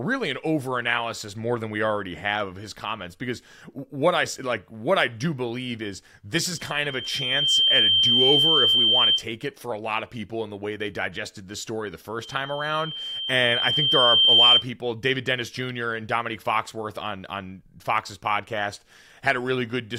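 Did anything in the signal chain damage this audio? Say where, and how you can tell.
Yes: loudspeaker feedback squeal, from the acoustic loop between microphone and loudspeaker. After "believe is this is" (6.57–9.25 s) and after "digested this story the" (12.22–14.66 s), a 3.1 kHz tone swells, over about one then two seconds, to roughly 10 and 15 dB above the speech. The loop gain exceeds one at that frequency, so the tone feeds itself. A spectrogram shows a bright horizontal line at 3.1 kHz, and the waveform a growing envelope.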